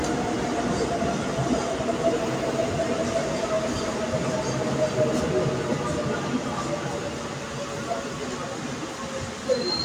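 No technical faults can be heard anywhere in the recording of these sounds, and the signal stays steady and intact throughout.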